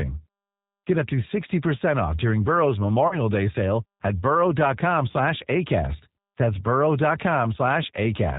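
From start to finish the speech has that slightly rough, synthetic G.729 codec quality, nothing above 4 kHz and plainly audible damage, which fits 8 kbit/s. Then from 3.08 to 3.16 s there's VoIP packet loss concealed by the speech codec: about 30 ms went missing, fitting a single lost packet, and the decoder stretched its last sound out as it faded, leaving the voice weak briefly afterward.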